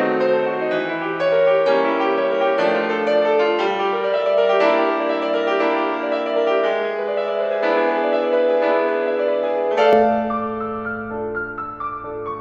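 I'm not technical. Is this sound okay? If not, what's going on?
No. From the start until about 9.93 s, the music sounds duller and flatter than it should, with no treble above about 8.3 kHz and a faint extra background hiss. At 9.93 s it suddenly brightens, with no gap and no jump in loudness. This is the pattern of an input switched to a poorer device: the recording likely began on a lower-quality microphone or headset input and then changed over to a better one.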